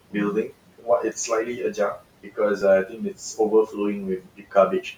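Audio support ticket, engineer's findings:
Noise suppressor artifacts, throughout. The suppressor pulls the steady room noise down by about 18 dB frame by frame, so the residual noise pumps, dipping in gaps and rising under speech.

Speech cut by the noise suppressor, 0.48–3.77 s and 4.19–4.85 s. The suppressor misclassifies quiet speech as noise and attenuates it by up to about 19 dB, roughly a second in the first span and about 0.3 s in the second. Soft consonants, word endings or a quiet phrase sound swallowed or faint.

Dropped buffer (overrun), 2.62 s. Small forward jump in the audio and no gap. Likely the capture side failed to read the buffer before the hardware overwrote it, losing a few milliseconds and splicing the two sides together.

The room noise, about 18 dB below the speech, is part of the recording itself; the suppressor's pumping is what is heard acting on it.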